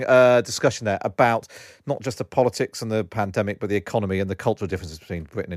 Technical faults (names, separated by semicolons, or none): none